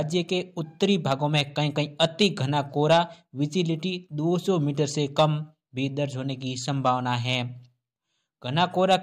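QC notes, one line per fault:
No technical faults are audible anywhere in the signal.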